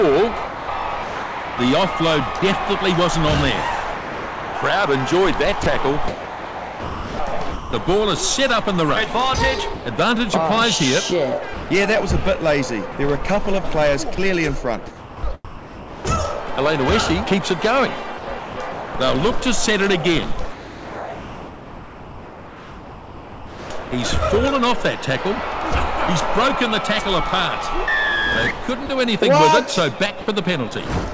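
The audio arrives band-limited, with nothing above 8 kHz, which fits a G.722 call path. Sound chopped by the voice detector occurs across 0.47–2.42, 3.95–7.73, 11.54–16.05, 17.35–18.93 and 20.52–23.91 s. Within these stretches, parts of the audio totalling 0.78, 1.95, 1.2, 0.48 and 3.27 s are swapped for comfort noise, so the sound turns choppy. The likely cause is a sender-side detector repeatedly gating transmission on and off. Sound dropped by the voice detector appears as brief gaps at 9.74–9.86 s (120 ms), 28.86–28.89 s (30 ms) and 30.21–30.27 s (60 ms). Each time the audio gives way to steady comfort noise and then resumes, likely because the detector misread low-level sound as background.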